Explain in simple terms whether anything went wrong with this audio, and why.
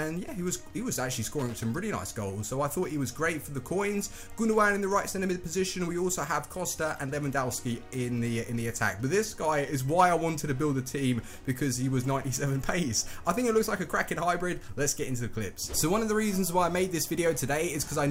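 From 1.39 to 1.64 s there is a short burst of loose connector crackle. A worn or dirty contact flickered on and off, chopping the sound into scratchy crackle. Unlike a single digital click, it is a quarter-second cluster of irregular, rough crackling.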